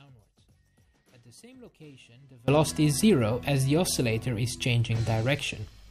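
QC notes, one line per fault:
0.00–2.48 s, audio dropout to a faint residue: already under way when the clip opens, only a faint leak of the sound about 30 dB down survives until the full signal snaps back, likely a lost feed with the downstream path still live, not a fade or pause.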